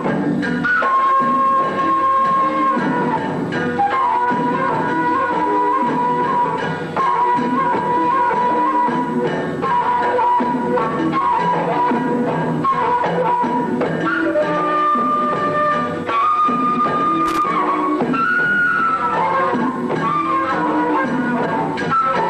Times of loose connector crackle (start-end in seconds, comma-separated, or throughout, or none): 17.26-17.51